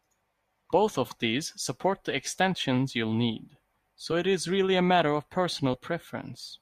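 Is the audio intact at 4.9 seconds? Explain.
Yes, the speech plays through 4.9 seconds without any audible dropout, click, distortion or other fault.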